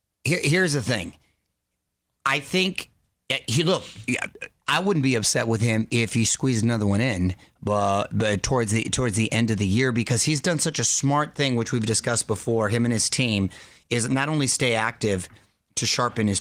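Nothing stood out as a fault on listening, beyond the light character the Opus voice coding leaves on the speech.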